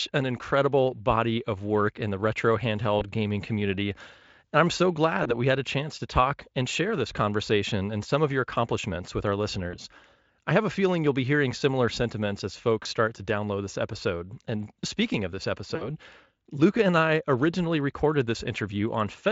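Lost VoIP packets, concealed by the speech codec, interrupt this speech recording five times. Each time the decoder bridged the gap by extrapolating from its last pitch and filter state. Single-frame losses of about 20 ms fall at 2.99–3.05 s, between "work in the retro" and "gaming community"; at 5.23–5.37 s; at 9.71–9.76 s, after "your accomplishments with our"; and at 12.83–12.86 s. A longer loss, which fits roughly three dropped 20 ms frames, comes at 15.75–15.90 s after "speaking of this". Each one is a brief buzzy or noisy, smeared patch that lingers past the gap, while the Speex coding carrying the call adds little or no audible damage.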